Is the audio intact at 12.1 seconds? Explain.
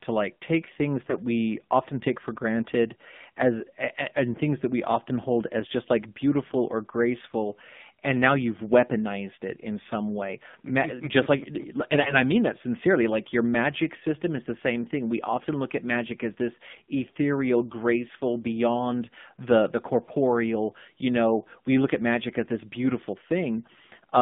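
No. From 11.92 to 12.19 s, between "just like" and "i mean that sincerely", the speech turns hoarse, scratchy and gargly while keeping roughly its pitch and loudness. These are AMR bit errors: on a weak link, flipped low-priority bits (around 7 percent, spread over what sounds like about ten frames) misplace the excitation pulses and skew the fine pitch, gain and spectral values.

Underneath, the speech has a buzzy, synthetic, band-limited quality confined to about 150 Hz to 3.6 kHz. This is the AMR narrowband mobile codec at 7.4 kbps, which rebuilds the voice from a vocal-tract model driven by sparse pulses and passes nothing above 4 kHz, so its damage is plainly audible here.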